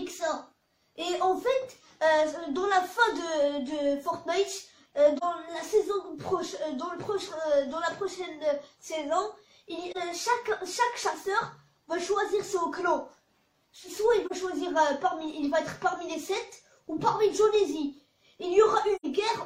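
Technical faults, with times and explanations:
5.17–5.23 s, 9.91–9.97 s, 14.26–14.32 s and 18.96–19.06 s, AAC frame loss with muting: the sound drops into brief dips, and at the end a short soft-edged hole. The first three are about 43 ms long, which fits one lost AAC frame each, and the last is about 85 ms, which fits two. The decoder zeroed the missing spectrum, and the overlapping windows fade the sound out and back in, so the gaps have soft edges. On a spectrogram each gap is a narrow vertical band of reduced energy across all frequencies. On the waveform the envelope tapers down and then rises again.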